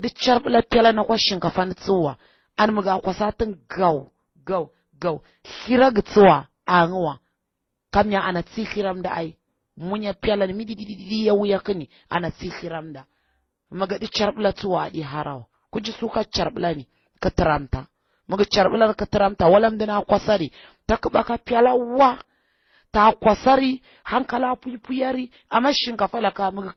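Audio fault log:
throughout, transcoding between lossy codecs: the speech sounds dull, with nothing above 6.2 kHz, and several different artefacts are heard together. This is likely from repeated lossy encoding, which fits a low-bitrate MP3, HE-AAC, Opus chain, each stage adding its own damage.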